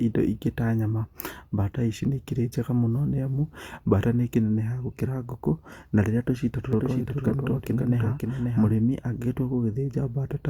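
Speech with a doubled audio track from 6.73 s to 8.73 s: a second, full-band copy of the speech trails about half a second behind, a few decibels quieter, switching on and off abruptly with no decay or room colour. It is likely a second capture through a slower path, or an edit that left two copies out of step. On a spectrogram, each syllable's pattern reappears shifted right by that gap; the waveform shows overlapping, offset envelopes.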